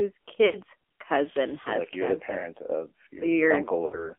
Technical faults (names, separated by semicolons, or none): AMR narrowband mobile codec; lost AMR speech frames